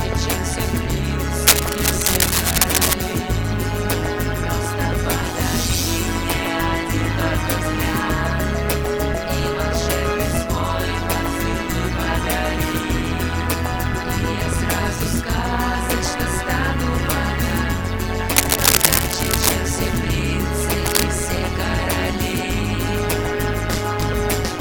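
Overlap-add ripple runs through the whole clip. The audio was split into windowed frames and rejoined with an overlap whose gains do not sum evenly, so the level dips by about 11 dB once per frame, around 150 times a second, giving a rough, buzzy flutter.

Cable scratch noise appears from 1.47 to 2.93 s, from 18.36 to 19.49 s, and from 20.86 to 21.03 s. These are dense, irregular rustling bursts about as loud as the sound itself, likely from a worn cable or connector being moved.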